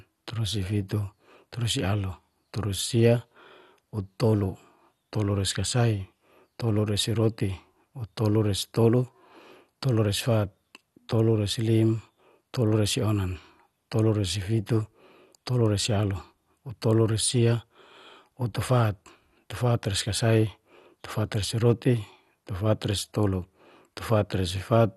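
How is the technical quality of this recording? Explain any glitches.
The recording is degraded throughout by MP2 compression: the speech sounds likely to have passed through an MPEG Layer II encoder at a low rate, perhaps around 64 kbps. Starved of bits, the encoder shuts off upper sub-bands, leaving nothing above about 12.2 kHz, and coarsely quantises the rest, so the speech sounds dull, gurgling and granular.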